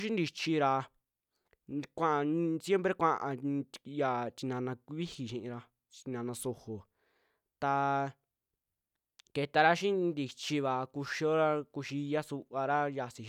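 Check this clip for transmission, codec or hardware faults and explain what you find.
No faults detected.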